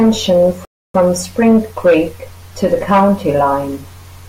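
Speech, interrupted by a Bluetooth stall from 0.65 to 0.94 s. The sound cuts to true silence for 294 ms and then carries on, likely because the headphones' buffer emptied while waiting for resent packets. Unlike packet-loss concealment, the gap is clean, with no warbling or repeated fragments.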